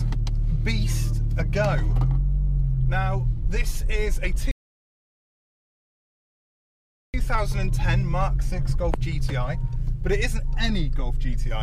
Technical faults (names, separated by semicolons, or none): rebuffering stall